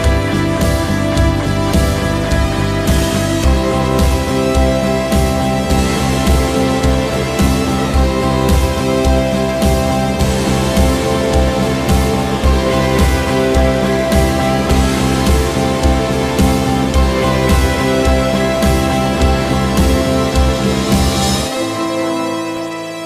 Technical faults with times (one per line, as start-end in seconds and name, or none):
18.56-22.57 periodic USB or driver dropouts